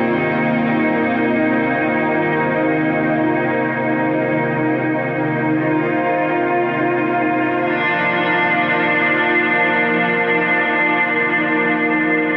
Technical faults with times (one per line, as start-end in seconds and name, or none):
none